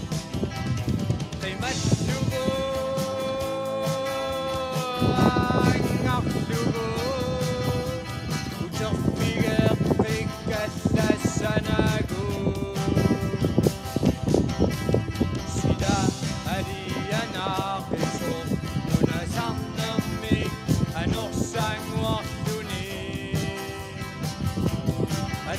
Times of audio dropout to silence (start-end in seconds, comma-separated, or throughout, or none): none